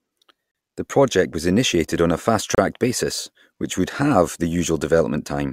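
A speech clip with two gaps between stream segments, at 0.51 to 0.55 s and 2.55 to 2.58 s, each about 33 ms of hard-edged silence. Segment timestamps leave a small hole that the player pads with silence, inserting time rather than dropping audio.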